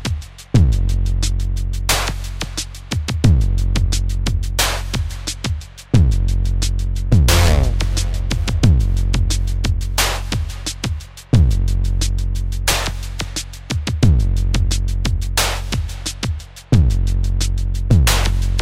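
No technical faults are audible.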